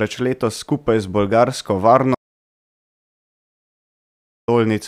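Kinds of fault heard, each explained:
Audio dropout to silence: at 2.15 s, right after "letos skupaj z bolgarsko", the speech cuts off into silence with no room tone until 4.48 s, losing about 2.33 s. The input was likely interrupted while the recorder kept writing silence.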